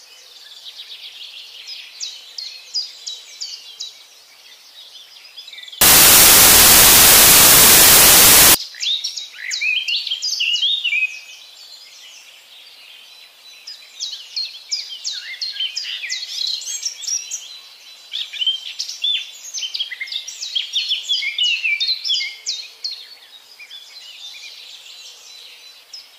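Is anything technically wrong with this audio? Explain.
Yes. From 5.81 to 8.54 s the samples are built from the wrong bytes. The reader assembles each sample's bytes out of order or shifted by one, so the rapidly changing low bits become the dominant part of every value. It comes across as loud, harsh broadband noise. On a waveform the section fills with large, dense swings, and on a spectrogram it turns into broadband energy.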